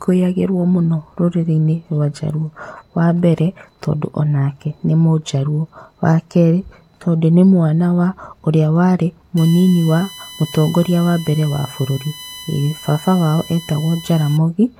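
Current drawn by the USB bus in 1 ms frames is leaking into the audio path through power or ground, producing USB whine in this speech clip from 9.37 s to 14.37 s. It sits under the speech as a steady, fixed-pitch tone built on 1 kHz, with its strongest component at the harmonic at 3 kHz, and it runs roughly 20 dB below the speech level, so it stays audible beneath it as a thin electronic whistle until shortly before the end.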